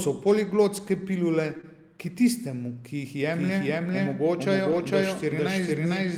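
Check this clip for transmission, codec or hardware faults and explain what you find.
Three kinds of fault are audible in this speech clip.

Short concealed packet loss occurs twice back to back, at 1.57 to 1.61 s and 1.61 to 1.65 s, each about 20 ms of audio arriving too late to decode. The receiver extended the preceding sound to cover each hole and then crossfaded back, so the passage comes out as a brief smear or wobble.

A doubled audio track starts at 3.33 s and runs to the end. It is most likely a second capture through a slower path or an edit that kept two copies. A full-band copy at roughly the same level trails about half a second behind, with no reverberant tail, and it begins abruptly.

A lost packet rebuilt from error correction shows at 4.71 to 4.81 s, where about 60 ms was reconstructed from low-bitrate backup copies carried in the following packets, which fits three 20 ms packets. 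There is no gap, but that stretch sounds rougher and noisier.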